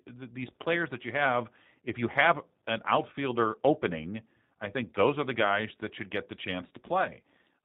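From the start, the whole recording carries G.729 codec damage, and it's plainly audible. Everything above 4 kHz is gone, and the voice sounds a bit rough and synthetic because it's rebuilt from a filter, a pitch predictor and a few pulses per frame, which fits the 8 kbit/s G.729A flavour.

Then at about 6.68 to 6.71 s, right after "that should get the", there's VoIP packet loss concealed by the speech codec. Roughly 30 ms went missing, which fits a single lost packet. The decoder stretched the last pitch and filter into a short sound that fades, and the voice stays weak or distorted just after while its frames recover.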